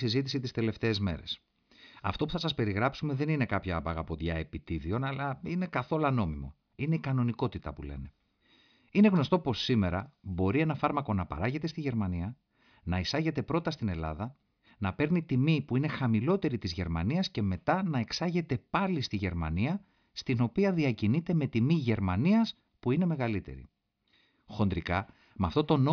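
No technical faults can be heard at any point in this speech recording.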